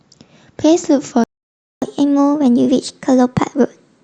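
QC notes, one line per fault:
1.24–1.82 s, playback stall: the speech cuts out mid-flow for about 0.58 s and then picks up again. That gap most likely comes from the player running dry of data or having its thread blocked, so nothing reached the output until it recovered.
1.82 s to the end, catch-up at higher speed: right after the gap the speech runs at 1.15 times normal speed, pitched up about two semitones. The player is resampling its backlog to win back the lost time, so tempo and pitch rise together.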